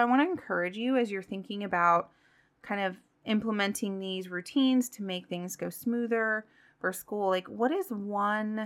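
No technical faults can be heard in this recording.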